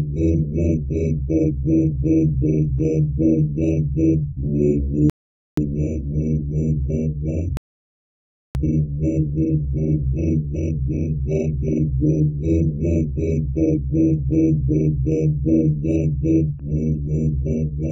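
At 5.10 s the sound drops into a rebuffering stall: everything goes silent for about half a second, 0.48 s, until 5.57 s, then picks up exactly where it left off, so nothing's missing, just delayed. The player simply ran dry of downloaded audio and waited for more. It happens again at 7.57 s, longer this time, nearly a full second of dead air to 8.55 s, before carrying on seamlessly.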